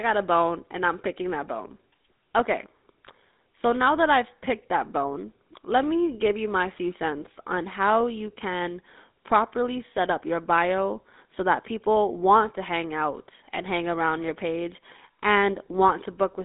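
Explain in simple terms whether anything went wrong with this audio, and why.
The whole clip has passed through the GSM full-rate codec, the old mobile-phone one. The speech is squeezed into a narrow phone band, with nothing above about 3.8 kHz, and the codec's rough, pulse-driven rebuild of the voice gives it that plainly buzzy, gravelly edge.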